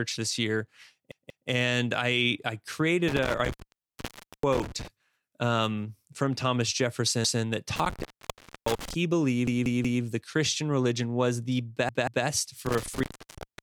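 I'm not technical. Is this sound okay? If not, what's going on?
No, there are two kinds of fault in this speech recording.

The first is a repeated buffer. The playback device ran short of fresh audio and replayed the chunk it had just played. Each chunk lasts about 0.19 seconds, which fits a buffer of 8192 samples. You hear a quick stutter, with the same sliver of speech looping and a hard edge at each repeat. It happens at 1.12 to 1.49 seconds (two extra plays), 7.25 to 7.43 (one), 9.47 to 10.03 (three) and 11.89 to 12.26 (two).

The second is an intermittent contact, where a loose plug or cable briefly loses its connection. The speech drops out with crackling at the start and end of each gap, and faint hiss remains while the line is open. The first dropout falls between 3.08 and 4.88 seconds and is silent for about 0.9 seconds. The second falls between 7.76 and 8.94 seconds and is silent for about 0.6 seconds. 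The last begins at 12.66 seconds and runs to the end of the clip, lasting about a second.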